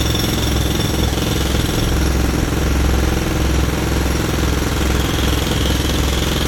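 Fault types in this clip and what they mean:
Nothing stood out as a problem on listening to this recording of sounds.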